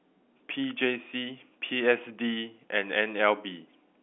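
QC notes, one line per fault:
No faults are heard in this speech clip. It carries the narrow band of ordinary G.711 A-law telephone coding, roughly 250 Hz to 3.4 kHz, with nothing above about 3.6 kHz.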